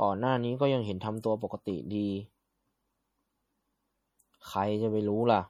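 Throughout, likely MP3 compression: weak frequency lines flickering between frames give the speech a watery swirl, fitting a 48 kbps bitrate.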